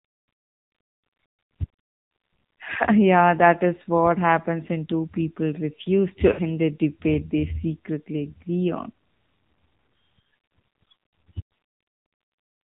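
Throughout, the speech carries AMR narrowband mobile codec damage: nothing above 4 kHz survives, and the voice sounds plainly buzzy and synthetic, pointing to a low mode around 7.4 kbps. Unlike a simple low-pass filter, the dullness comes with vocoder-like roughness from the pulse-driven vocal tract model.

From 6.32 to 6.42 s come lost AMR speech frames. About 60 ms of speech is missing, which fits three consecutive 20 ms frames failing. The decoder stretches the last good pitch and vocal tract settings with shrinking gain, so the sound smears and fades instead of cutting off sharply the way a plain dropout would, then returns weak or rough for a moment.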